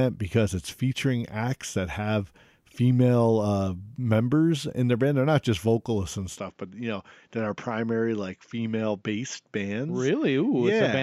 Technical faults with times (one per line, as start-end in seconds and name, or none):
6.38-11.03 input switched to a poorer device